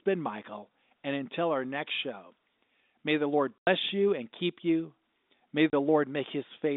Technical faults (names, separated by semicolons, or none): packet loss filled with silence